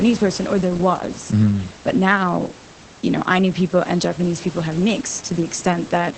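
Opus voice compression runs through the whole clip. The coder is in its linear-prediction SILK mode at wideband, so nothing reaches above about 8.5 kHz. The top of the band is simply gone, and the speech sounds muffled. The excitation is coded coarsely, which gives a hoarse, slightly robotic edge. The damage is plainly audible and points to a low bitrate, around 12 kbps. The room noise, about 19 dB below the speech, also passes through the codec.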